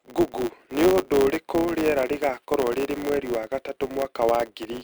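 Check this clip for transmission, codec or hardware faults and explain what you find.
One fault runs through the whole speech clip: a filter restarted on every block. The filter drops its memory at each block boundary and starts again from silence, leaving a small transient every 10 ms. This gives a 100 Hz buzz that rises and falls with the speech level. A waveform shows evenly spaced ticks, and a spectrogram shows a 100 Hz harmonic comb.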